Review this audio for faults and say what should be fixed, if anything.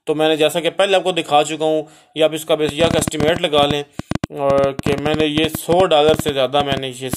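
There's a train of clicks running from 2.69 s right to the end at 7.15 s, somewhere around forty of them at roughly 9.7 per second, with uneven spacing. Each one is a short, same-shaped pulse sitting well above the audio, so you hear a jittery ticking over everything, gaps included. The irregular pace points to a likely electrical intrusion, such as nearby gear interfering or a faulty connection or power supply. To prevent it, move phones and switching supplies away from the chain, and check the interface's connection and power.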